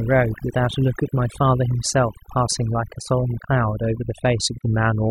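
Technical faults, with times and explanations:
Throughout: overdone noise removal. A noise reduction stage was pushed too hard, so any frequency band sitting close to its idea of the noise floor gets pulled far down or cut off entirely, and the softer parts of the speech fall below that line and vanish with the hiss. What remains between phrases is an almost dead background sprinkled with little twinkling specks.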